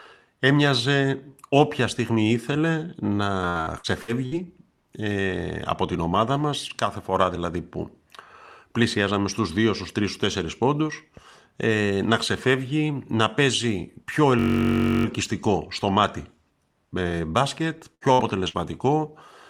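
From 3.49 to 4.46 s, just before "ε από την ομάδα", repeated packet loss (robotic sound) leaves five holes, the longest 58 ms, patched by extending prior sound. It sounds choppy, with pieces missing, with smeared, repeated spectral slices.

At 14.39 to 15.05 s, after "ξεφεύγει να παίζει πιο", a system hang loop repeats a 21.33 ms piece 31 times. That fits a 1024-sample buffer. It makes a steady 46.9 Hz buzz, seen as identical periodic waveform cycles and vertical striping.

Three bursts of packet loss follow "ε μπάσκετ", at 17.95, 18.13 and 18.48 s. Each drops about 60 ms, filled by continuing the last sound and turning it down, which appears as a fading smear before the audio jumps ahead.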